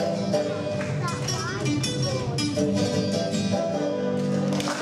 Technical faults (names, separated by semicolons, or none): none